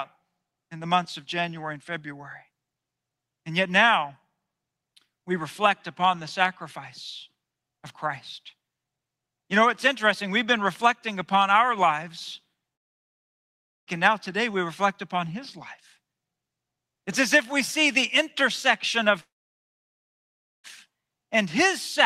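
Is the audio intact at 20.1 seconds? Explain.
No. At 20.1 seconds the speech is in a gap from 19.21 to 20.67 s, right after "see the intersection of". The last sound trails on as a brief fading buzz, then goes silent for most of the span, and the speech resumes with about 1.44 s missing. This is likely a long network dropout, with the receiver padding the hole. On a waveform it appears as a flat band. On a spectrogram, a short smeared tail gives way to an empty dark block.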